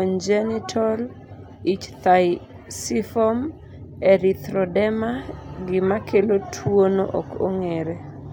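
A speech recording with no technical faults to point to. Nothing in it calls for a time or a cause.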